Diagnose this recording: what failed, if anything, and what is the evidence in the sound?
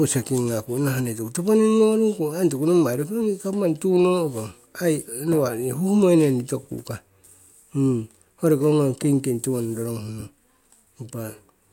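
Nothing in the recording stood out on listening as a failure at any stage of the chain.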